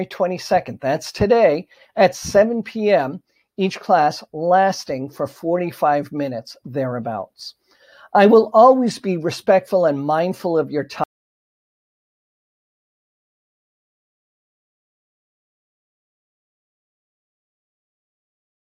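At 11.04 s the sound stops dead in mid-flow and never returns: from there to the end the clip is silence, without even the faint room tone or noise floor. This is an audio dropout to silence, most likely caused by the input being lost through a disconnected device, a failed link or an accidental mute while the recorder kept writing silence, so whatever followed that moment is simply missing.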